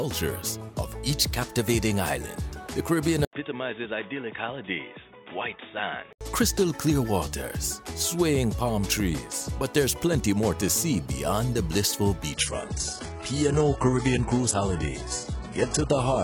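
At 3.25 s the sound drops out for 80 ms, then returns dull and boxy, roughly 10 dB quieter, with nothing above 3.7 kHz and new background noise sitting around 40 dB below the signal. This is likely an input switched to a poorer device, narrowing the band until 6.21 s.

From 12.34 s to the end, the stream shifts to lower quality with no gap: the treble drops away, nothing remains above 11.1 kHz, and codec artefacts become audible. This adaptive stream at a lower bitrate points to a drop from a mid-rate AAC version to a very low-rate HE-AAC one.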